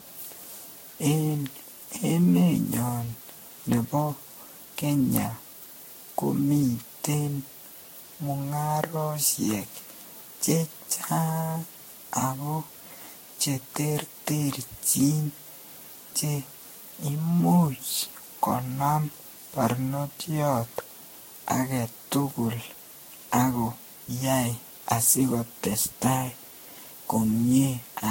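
Generation loss runs throughout the speech: swirly, hollow, smeared sound with blurred attacks and nothing above 16.6 kHz. The damage is worse than a single encode near 64 kbit/s would produce, likely from around ten successive Vorbis passes stacking their quantisation errors.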